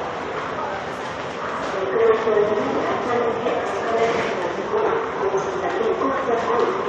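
At 0.57 s, 3.45 s and 6.42 s, each lasting about 14 ms, brief chirps or blips break through the sound, the signature of damaged data in a compressed stream. At those points the decoder hits corrupted bytes, misreads the frames and loses sync until it finds the next valid frame header. On a spectrogram each event shows as a thin vertical smear across many frequencies. In the waveform each appears as a short, abrupt discontinuity.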